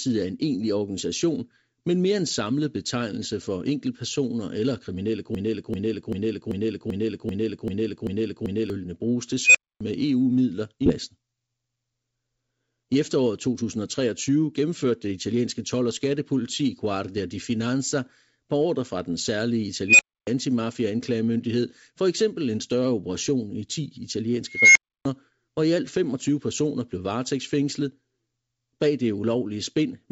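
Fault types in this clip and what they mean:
Broken-record loop: A roughly 0.39 s fragment repeats nine times straight after "for enkeltpersoner eller kriminelle", likely a stalled stream resending its last chunk, before "bruges til" resumes.
Unstable filter: Three times, a squeal near 3 kHz or 2 kHz swells over 0.1 to 0.23 s, clips, then drops to roughly 0.3 s of silence as the filter blows up.
Skip ahead: Around 10.9 s, playback jumps forward with no gap, losing about 0.7 s of speech as a chunk is dropped and the sides are spliced together.
Jitter buffer speed-up: Twice, the buffer trims tiny pitch-period slices to shed backlog, so speech runs about 12% and then 9% fast at unchanged pitch and sounds hurried.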